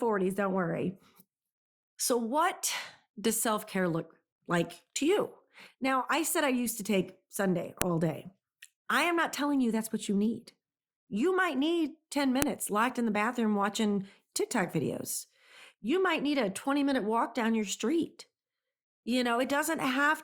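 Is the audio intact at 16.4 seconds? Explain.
Yes, the audio is intact at 16.4 seconds, with no fault audible at that moment.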